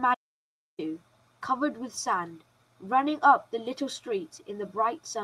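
Speech that cuts out to silence from 0.15 s to 0.79 s, about 640 ms with no room tone at all, before resuming mid-flow. This audio dropout to silence most likely came from the input briefly disconnecting or muting while recording carried on writing silence.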